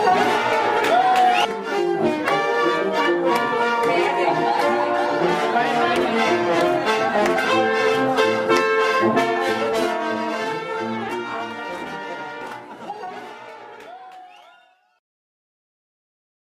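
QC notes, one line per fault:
No faults heard; nothing to log.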